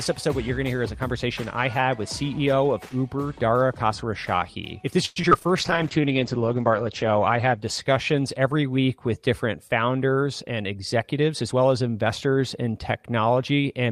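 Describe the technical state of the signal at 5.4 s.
At 5.4 s the signal sits inside a burst of repeated packet loss (robotic sound), from 5.05 to 5.47 s. Five gaps were patched by extending the previous sound, so it turns choppy with pieces missing. A jitter buffer slow-down also begins at 5.37 s and runs to 6.02 s. The receiver stretches audio to about 95% speed at unchanged pitch, so sounds drag slightly.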